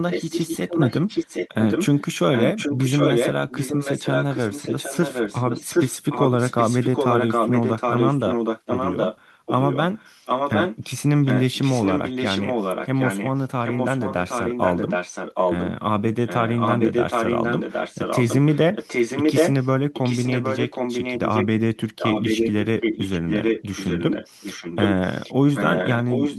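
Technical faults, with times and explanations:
0.1–2.01 s, 2.33–10.84 s, 11.24–15.71 s, 16.26–21.46 s, 21.79–26.39 s, echo leak: a second copy of the speech trails the original by about 0.77 s. It's a little quieter in the first and third stretches and roughly as loud as the speech in the rest. Likely the far end is on a loudspeaker and its echo canceller isn't removing what its mic picks up, so the leftover gets sent straight back.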